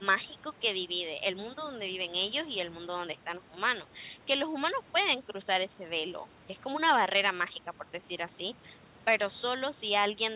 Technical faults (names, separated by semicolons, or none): none